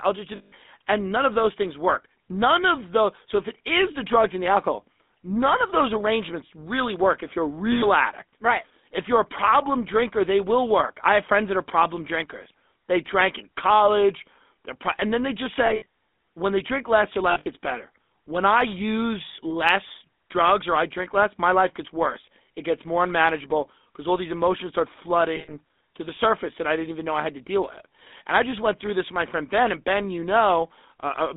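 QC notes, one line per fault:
throughout, GSM full-rate codec: a buzzy, gravelly roughness sits on the whole clip, and the band is held to about 200 Hz to 3.6 kHz. On a spectrogram there is a hard ceiling near 3.6 kHz, an empty floor under 200 Hz, and harmonics blurred into a coarse, pulse-regular grain. The sound fits the 13 kbps full-rate codec.
0.36–0.53 s, 7.72–7.84 s, 15.66–15.86 s, 17.30–17.47 s, 25.36–25.53 s, lost GSM frames: each time, the last good sound is held as a rough metallic ring that repeats. This happens because the decoder recycles the last good frame at falling level. The gaps last 100–160 ms. At 15.66 s and 17.30 s the losses are scattered into short runs. A spectrogram shows frozen flat bands in these spots, and the waveform shows a repeating envelope.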